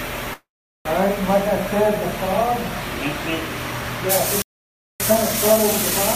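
At 0.33 s a call audio freeze begins and lasts until 0.87 s. The sound does not stop cleanly: the last moment is briefly extended by the receiver, then about 0.4 s of silence follows. This likely happened because packets were delayed in transit and the jitter buffer ran dry. When data arrives again, the audio continues from exactly where it stopped. Nothing is lost, but everything afterwards runs about 0.52 s later.

From 4.42 s to 5.0 s a playback stall cuts the sound off mid-flow, leaving about 0.58 s of silence. The likely cause is that the player ran out of data or its output thread was blocked. In either case the output stays silent until the player recovers.

From 5.0 s to the end, time-compressed catch-up follows the stall. The player works through its backlog by removing short pieces and cross-fading the joins. As a result the audio runs about 1.1 times faster than normal, while its pitch stays unchanged.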